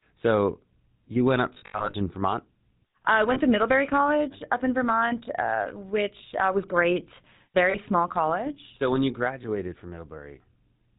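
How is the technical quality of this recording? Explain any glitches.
The recording is degraded throughout by coding damage, with several brief dropouts of the same type.

GSM full-rate codec: The whole clip sounds buzzy and gravelly, with nothing above 4 kHz. This fits 13 kbps GSM full rate, which rebuilds the voice from a vocal-tract model driven by coarse, regularly spaced pulses.

Lost GSM frames: After "you went up", from 1.54 to 1.95 s, the sound repeatedly freezes into a rough metallic ring. The gaps are scattered over about 0.4 s, with the longest near 70 ms. Shorter rings occur at 3.34–3.40 s, at 6.18–6.22 s just before "uh was great", and at 7.70–7.77 s, between "uh was great" and "small college". In each case the decoder repeats the last good frame.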